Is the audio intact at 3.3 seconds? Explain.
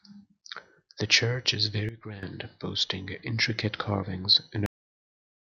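Yes, the speech at 3.3 seconds plays through intact, with no audible fault at that moment.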